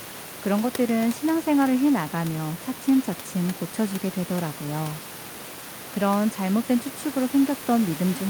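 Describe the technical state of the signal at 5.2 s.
At 5.2 s the signal is intact, with the speech carried cleanly over the room's own background noise sitting about 17 dB below it.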